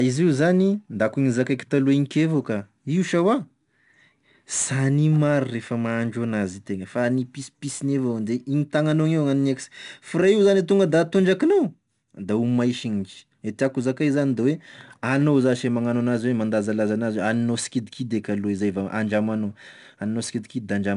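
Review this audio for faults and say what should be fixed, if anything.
4-bit ADPCM compression runs throughout the clip: a gritty hiss rides on every loud stretch of the speech, rising and falling with the level, and nothing is heard above 10.6 kHz, which points to a 4-bit stream near 89 kbps. Each sample is coded as a coarse step from a prediction, and that rounding error becomes noise that tracks the signal. To prevent it, export from the original source as PCM or with a modern higher-quality codec instead of ADPCM.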